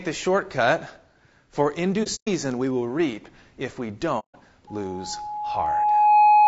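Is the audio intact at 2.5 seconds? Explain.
No. At 2.52 s, just before "we will reap if", there is a bit error spike. A flipped bit makes a sample or two jump and return, heard as one sharp broadband tick. The sound is also rough and grainy, with noise between harmonics and a dulled top band. The likely cause is low-delay AAC compression (AAC-ELD), at a rate that fits about 32 kbps.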